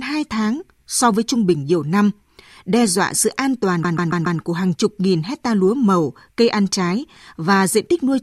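Repeated frames from 3.83 to 4.39 s replay one 139 ms chunk four extra times, making a stutter that shows as identical tiled blocks on the spectrogram.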